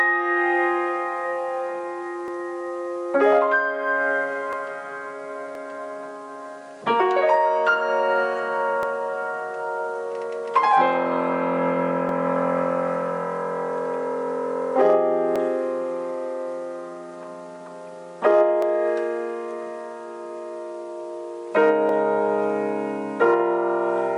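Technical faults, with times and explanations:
2.28–21.89 s, clock drift buffer slips: regular clicks every 3.27 s, likely two unsynchronised clocks roughly 200 ppm apart, each slip dropping or repeating around 30 samples.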